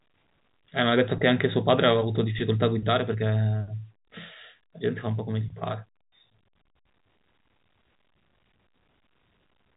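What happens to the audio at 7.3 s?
Nothing goes wrong at 7.3 s; the speech passes intact through the telephone-band G.711 coding, with no dropout, click or distortion at that moment.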